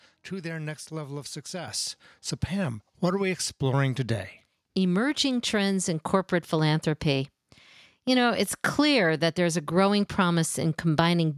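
Speech, with a microphone volume stepped up at 1.68 s, right after "their next level of": voice and background noise jump together by about 8 dB in a single step, as the input gain is raised. A talker leaning closer would lift only the voice, and gradually.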